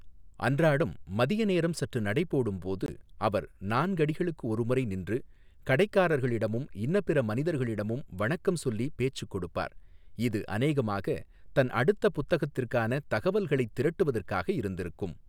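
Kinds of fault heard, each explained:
Bluetooth stall: the speech drops to silence for about 19 ms between 2.86 and 2.89 s, then carries on. The likely cause is interference delaying packets on the wireless link, so the receiver's buffer emptied and playback paused until the retransmitted audio arrived.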